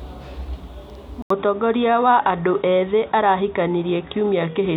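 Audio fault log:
1.22–4.76 s, input switched to a poorer device: after a gap of about 80 ms the speech turns dull and boxy and stays that way to the end, with nothing above 3.8 kHz, a faint new noise floor well below the speech, and loudness about the same. This is likely a change to a narrower-band microphone or headset path. On a spectrogram the upper band abruptly goes empty after a thin blank column; the waveform shows a brief flat gap, then similar amplitude.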